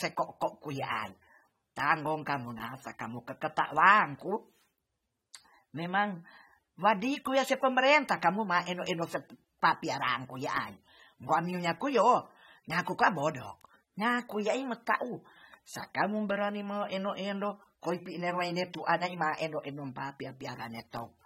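From start to finish the speech carries plainly audible coding damage, likely from AAC compression at a low bitrate, with the texture fitting AAC-LC at around 32 kbps. Nothing remains above 16.5 kHz, so the top end is cut off flat. Below that, the coder has thinned out parts of the spectrum to save bits, which dulls the sound and smears detail, leaving a warbling, fizzy edge on sibilants and held vowels.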